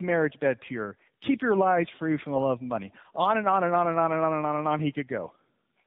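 From start to finish the speech carries tandem speech coding. It sounds rougher, more muffled and more warbly than a single narrowband codec would make it, which fits two AMR-NB stages with a G.711 link between them, each coder working on the previous one's errors. That compounding roughness is what separates it from one low-bitrate pass. Nothing reaches above about 3.7 kHz, so the sound is also band-limited like a telephone call.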